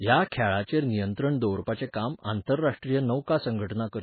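MP3 compression runs through the whole speech clip. Nothing is present above 4.5 kHz, and the remaining band sounds watery and swirly as weak frequency lines drop in and out between frames. The damage is heavy, which fits a very low bitrate near 16 kbps, the likely cause.

Pre-echo appears from 2.77 to 2.82 s. A sharp attack falls late in a transform block, so the codec's quantisation noise, sized for the loud onset, spreads back across the quiet gap before it. The result is about 54 ms of hiss ahead of a softened, smeared attack.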